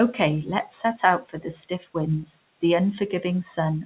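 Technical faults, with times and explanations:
1.22–1.46 s and 1.69–1.95 s, speech cut by the noise suppressor: it took speech for noise, dipping about 14 dB, then about 11 dB just before "winds the", so brief stretches sound swallowed.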